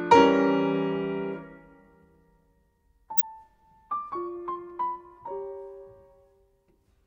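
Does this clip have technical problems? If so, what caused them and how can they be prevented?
Yes. From 3.17 to 3.24 s there is a brief, fairly loud glitch caused by a corrupt frame decoded. Flipped bits in roughly two compressed frames made the decoder place energy at the wrong frequencies. Unlike a dropout or concealed packet loss, nothing is smeared; spurious sound appears instead. Adding checksums to each frame and muting or concealing any frame that fails the check would prevent it.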